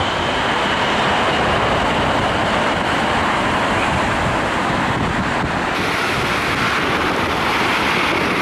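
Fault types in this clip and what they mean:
Section at the wrong speed: from 5.75 s, sound plays 1.38 times fast, about five semitones high, likely a clock mismatch; spectrogram bands jump upward, waveform compresses.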